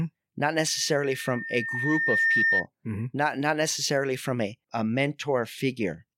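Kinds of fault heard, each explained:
Loudspeaker feedback squeal: the microphone re-captures its own loudspeaker, and at 1.8 kHz the loop gain exceeds unity, so that tone grows by itself from 0.66 s, swelling over roughly a second and a half to sit a few dB above the speech before stopping at 2.67 s.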